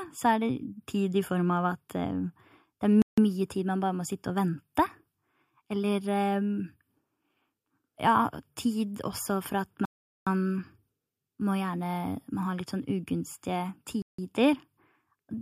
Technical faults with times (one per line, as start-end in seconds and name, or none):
3.02-3.18 Bluetooth stall
9.85-10.27 Bluetooth stall
14.02-14.18 Bluetooth stall